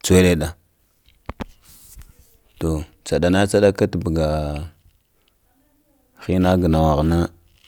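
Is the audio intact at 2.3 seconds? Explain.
Yes, the speech at 2.3 seconds plays through cleanly, with no dropout, click or other fault at that moment.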